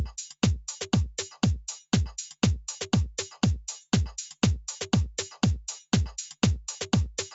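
Nothing stood out on listening to this audio.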